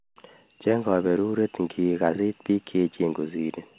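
Nothing in this speech clip stood out as a technical fault on listening.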